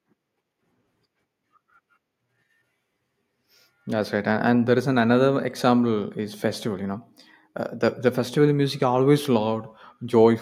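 Nothing in this speech recording stood out as a technical problem on listening.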